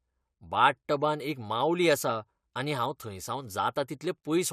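No technical faults can be heard anywhere in the speech recording. Nothing interrupts, distorts or alters the audio at any point.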